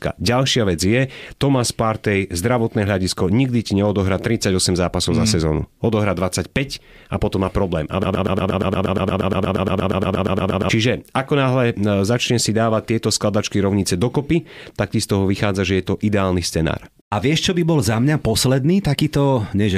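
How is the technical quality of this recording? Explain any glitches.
The recording has one clear glitch, a broken-record loop in the speech. From 8.03 to 10.69 s, a 0.12 s fragment repeats 23 times back to back, and the speech that should have played there is lost. The likely cause is a stalled stream resending its last buffer. Unlike echo, the copies are identical and never fade.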